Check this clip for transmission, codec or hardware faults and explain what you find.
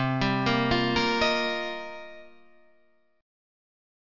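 There's one fault, aliasing, running the whole way through. It sounds like a drop to about 12 kHz with no anti-alias filter, so anything above 6 kHz folds back as gritty, metallic tones, not far below the real sound.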